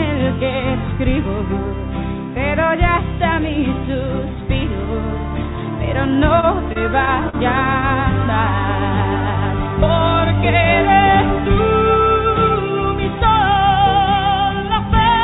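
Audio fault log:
6.14–7.35 s, repeated stalls (stutter): late packets emptied the jitter buffer seven times (longest 42 ms), so the last sound was stretched to fill about 135 ms, dragging without losing anything.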